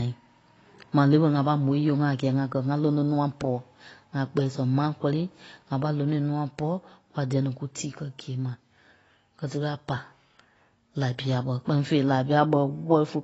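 Throughout, the speech sounds dull and smeared, with a fizzy warble and nothing above 8 kHz, likely AAC compression at a low bitrate near 24 kbps.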